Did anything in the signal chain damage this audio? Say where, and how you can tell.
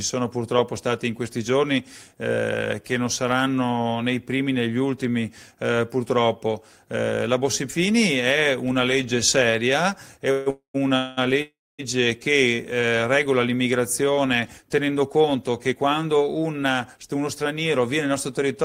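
Yes. There are four call audio freezes, at 10.31 to 10.48 s, 10.50 to 10.76 s, 10.96 to 11.19 s and 11.42 to 11.81 s. In each, the last sound is stretched into a fading buzz for 0.15, 0.24, 0.21 and 0.37 s. The second and fourth fade to silence, for 120 ms and 250 ms. Then the audio picks up where it stopped, with nothing lost. This is a network stage fault. Packets were likely delayed and the jitter buffer ran dry.

From 14.62 to 16.98 s there is a jitter buffer speed-up. The audio plays at 108 percent speed while the pitch stays put, so it sounds hurried. The receiver's buffer had filled past its target, which fits the delayed packets arriving together after the freezes. To shed that backlog it cut many tiny pitch-period slices in a row, trimming roughly a fifth of a second in total. It sits at the buffer stage, after the network.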